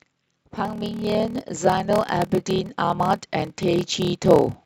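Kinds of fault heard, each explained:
Block size mismatch (padded): A stage writes shorter blocks than the next reads, which fits 1024-sample blocks, and zeros fill each remainder, giving a 38.3 Hz buzz and playback at 0.889 speed, timbre unchanged.
Automatic gain rising: The gain control judged the input too quiet and raised its gain steadily, so speech and background swell together by about 8 dB from 0.55 to 4.59 s.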